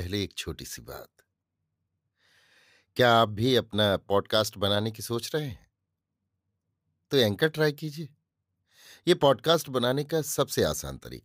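No dropouts, clicks, distortion, level jumps or timing defects are audible anywhere in the recording; there are no faults to report.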